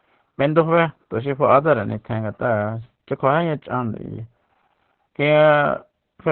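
From start to finish the speech carries Opus voice compression, and the damage is heavy. Nothing comes through above about 4 kHz, so the band is narrowband, like an old phone line. The codec is working in its SILK linear-prediction mode. It rebuilds the voice from a coarse excitation signal, in 20 ms frames. That is why the speech sounds muffled, hoarse and faintly robotic. The starved detail fits a bitrate near 8 kbps.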